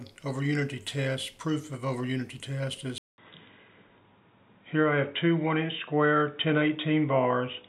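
At 2.98 s the sound drops out for about 200 ms. It then returns dull and boxy, with nothing above 3.8 kHz. The level shifts by a few dB, and a faint new noise floor appears. This is likely an input switched to a poorer device.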